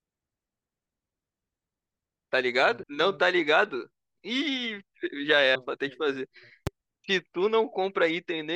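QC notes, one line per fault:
2.83 s and 5.55 s, compressed frames skipped: the audio jumps ahead by about half a second, then by roughly 0.3 s, as whole 32 ms frames go unplayed. The waveform shows a sudden discontinuity at each join.
6.67–6.69 s, loud pop: a single sharp pop, roughly 15 dB above the surrounding level, sits on top of the sound, which continues underneath. It is likely a voltage pulse from a plug, switch or driver glitch. The waveform shows a tall narrow spike, and the spectrogram a bright vertical broadband stripe.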